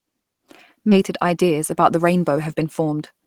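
At about 0.91 to 0.93 s there's a skip ahead. Roughly 0.7 s of speech got dropped while later audio was already queued, so playback jumps straight across with no gap, and the two sides butt together almost directly.

From 1.09 s to the end you get a jitter buffer speed-up. The buffer had backed up, so the receiver kept trimming tiny pitch-period slices, about a fifth of a second in total. Speech runs roughly 8% fast at unchanged pitch, sounding a bit rushed.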